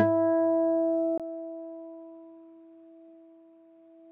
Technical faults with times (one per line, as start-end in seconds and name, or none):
1.18-4.12 input switched to a poorer device